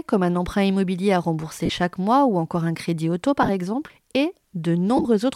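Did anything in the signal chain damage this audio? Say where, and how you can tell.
Yes. The speech briefly turns into a hissy, smeared blur at 1.66 to 1.70 s, between "un emprunt immobilier à" and "chaque mois ou encore"; at 3.42 to 3.49 s, after "encore un crédit auto" and before "exemple et"; and at 4.97 to 5.05 s. These are lost LE Audio frames on the Bluetooth link. The LC3 decoder conceals each gap by repeating the last spectrum with randomised signs. About 38 ms is missing in the first gap and in the second, where it is scattered over 60 ms. The third loses about 60 ms across 75 ms, in runs of up to roughly 30 ms, consistent with 7.5 ms frames. The light codec coding is audible at most as a faint watery texture on noise and attacks.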